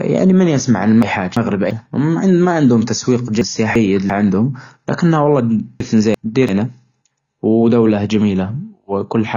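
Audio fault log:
Throughout: AAC compression, likely. The sound is dull and smeared, with nothing above 7 kHz and a fizzy, warbly edge on sibilants and held sounds. That's what a perceptual codec does when it's starved of bits: it drops the top band, then quantises what's left so coarsely that bands thin out or get patched with noise. The damage is plainly audible, which fits a low bitrate somewhere around 24 kbps.
1.02–1.71 s, 3.41–4.10 s, 5.80–6.49 s: chunks out of order. Each time, a 341 ms piece of audio turns up one slot late and plays after the piece that should come after it, so two neighbouring chunks come out swapped. Nothing is missing, but the sequence jumps, and you hear a short jumbled moment, with three hard joins where the mismatched edges meet.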